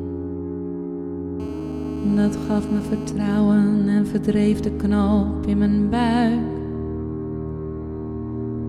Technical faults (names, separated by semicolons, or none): GSM phone buzz